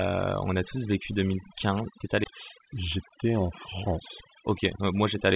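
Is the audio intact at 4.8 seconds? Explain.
No. From 4.40 to 5.15 s a jitter buffer speed-up trims excess buffered audio, cutting about 50 ms of pitch-period slices so the speech runs 6% faster, hurried but unchanged in pitch. Throughout the clip, overdone noise removal also pulls frequency bands near the noise floor down hard, leaving twinkling specks in near silence.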